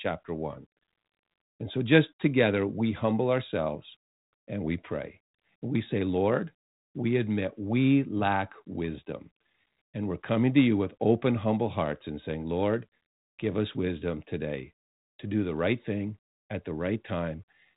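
Nothing stood out on listening to this speech, which comes across at the narrow telephone bandwidth of a 32 kbit/s G.726 link, with nothing above about 3.8 kHz.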